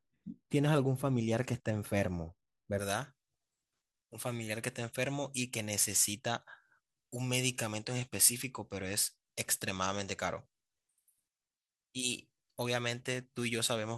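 From 2.79 s to the end, the speech has pre-emphasis left on: the treble boost was never undone, leaving highs about 11 dB up at 10 kHz relative to 1 kHz, a tilt that fits a J.17 curve. It sounds thin, bright and sibilant, and a spectrogram shows unusually dense energy above a few kHz.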